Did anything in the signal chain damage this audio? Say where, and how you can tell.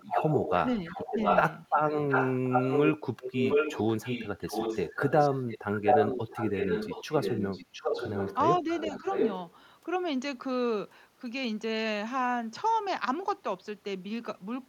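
Yes. In call processing, the far end's echo canceller likely failed to remove what its microphone picked up from the loudspeaker, causing an echo leak. A second copy of the speech trails 705 ms behind at roughly equal level, from 0.0 to 0.54 s, 0.88 to 2.88 s and 3.2 to 9.54 s.

Speech suppressed in double talk also arises in call processing. With both sides talking at once, the canceller likely treated the talker as echo and turned it down. Short dips of about 5 dB occur within 0.8 to 1.18 s and at 8.57 to 8.68 s, with a deeper one of about 10 dB at 9.0 to 9.06 s.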